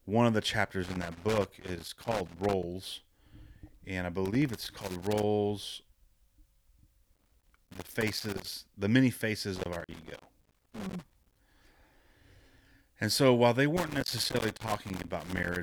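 Loose connector crackle at 0.83–2.63 s, 4.26–5.23 s (after "and I"), 7.14–8.53 s, 9.56–11.36 s (after "the many") and 13.77–15.57 s (after "so while they"): a worn contact chops the speech into scratchy bursts, seen as ragged waveform dropouts and broadband vertical streaks on a spectrogram.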